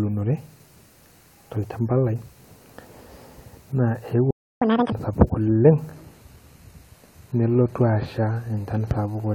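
Speech, with three faults from 4.3 s on. At 4.31 s the sound cuts out mid-flow and stays silent until 4.62 s, a gap of about 0.31 s. This is a playback stall. The likely cause is a player that ran short of buffered data or had its audio thread blocked. From 4.62 s to 4.92 s the speech rushes at double speed, and its pitch jumps by nearly an octave. This is catch-up at higher speed. The player resamples its backlog to recover the time lost in the stall. Because resampling ties pitch to speed, the voice turns shrill and chipmunk-like. It then snaps back to normal rate and pitch at 4.92 s. At 5.92 s the tone changes abruptly with no gap, and it stays degraded to the end. The treble loses its natural air, and what remains up high has a synthetic, hissy sheen. Swirly codec artefacts also become audible. This is an adaptive stream at a lower bitrate. The sound fits a switch from AAC-LC at about 96 kbit/s to HE-AAC near 20 kbit/s, after a slowdown in the connection. 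At that low rate the upper band is rebuilt by spectral band replication rather than carried directly, which explains the artificial treble.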